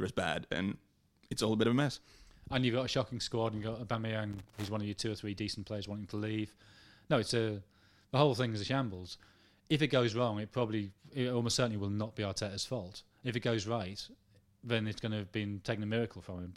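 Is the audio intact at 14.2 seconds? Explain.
Yes, the speech at 14.2 seconds is intact, with no dropout, glitch or other fault at that moment.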